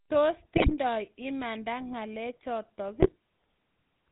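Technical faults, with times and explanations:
Throughout: GSM full-rate codec. The speech has the buzzy, gravelly roughness of the original GSM coder, plainly audible across the clip. The codec rebuilds the voice from a vocal-tract filter excited by a sparse train of regular pulses, with only one excitation sample in three kept, which gives the grainy texture. Nothing above 4 kHz survives, so sibilants and breath lose their top and the sound is dull and narrow, consistent with a 13 kbps full-rate stream.
0.56–0.75 s and 3.00–3.13 s: GSM bit errors. In these two stretches, the first about 0.19 s long and the second about 0.13 s, the speech breaks into squawks, pops and gargling. Corrupted bits reached the decoder at roughly a 4 to 4.5 percent error rate, damaging filter, pitch and gain parameters. Each bad frame is rebuilt with a bent spectrum or a sudden level jump, which fits several consecutive 20 ms frames being hit in each burst.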